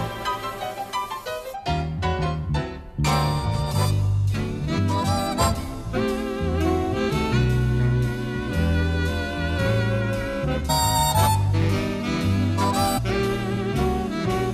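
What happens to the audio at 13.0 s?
At 12.97 to 12.99 s there is damaged data in the compressed stream. Bad bytes in the file make the decoder misread those frames. It loses sync and hunts for the next valid frame header. The result is a brief chirp or blip.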